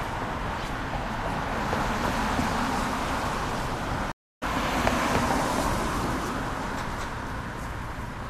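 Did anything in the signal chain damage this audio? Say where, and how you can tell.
Yes. At 4.12 s the sound drops out into silence for about 300 ms and comes back at 4.43 s. When it resumes, it is at a different point in the material, roughly 0.4 s further on, so a short stretch is skipped rather than delayed. That is a stream reconnect at the network stage: the connection broke, the player went quiet, reconnected, and started a fresh decoder partway through the live stream.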